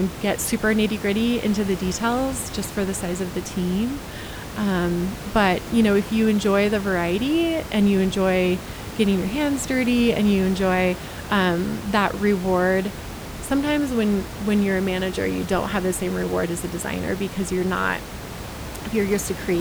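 There are no technical faults to describe in this speech clip, only room noise about 12 dB below the speech, which belongs to the recording.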